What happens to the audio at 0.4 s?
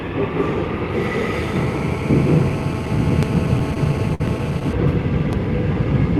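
Nothing goes wrong at 0.4 s: the sound passes through the call path intact at that point, with no dropout, glitch or distortion.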